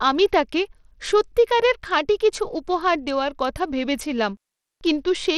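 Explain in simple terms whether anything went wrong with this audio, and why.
Throughout the speech, the treble sounds thin and flickery with a gritty edge, most likely from Bluetooth SBC compression starving the highest frequency bands of data.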